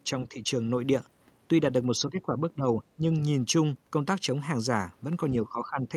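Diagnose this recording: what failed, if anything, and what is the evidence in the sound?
The speech dips in level at 0.29 to 0.36 s (a shallow dip of a few decibels), then more deeply, by roughly 15 dB, at 1.9 to 2.65 s, 2.96 to 3.07 s and 5.43 to 5.91 s. This pattern points to call processing, most likely speech suppressed in double talk: with both ends talking at once, the echo canceller could not separate the near talker from loudspeaker echo and attenuated the talker along with it.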